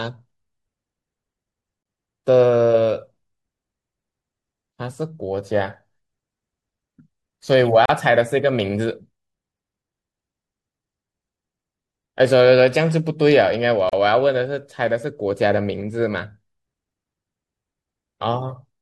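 Speech carrying a gap at a join of encoded pieces: brief silences at 1.83 s (26 ms), 7.86 s and 13.89 s (37 ms each), spaced every 6 s as untrimmed encoder delay and padding. That strict regularity, with sound resuming exactly where it stopped, separates it from random network dropouts.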